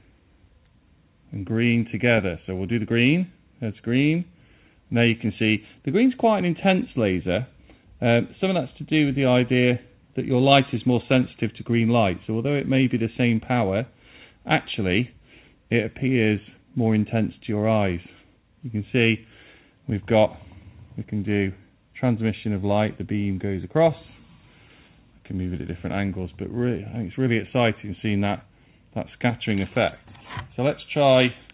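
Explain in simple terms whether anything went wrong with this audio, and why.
Nothing went wrong here; the audio simply has the narrow, phone-call quality you'd expect from a standard call line, which carries nothing above about 4 kHz.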